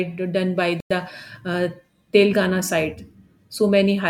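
At 0.80 s, just after "done by", the speech drops to silence for about 0.10 s, likely a Bluetooth stall, then resumes.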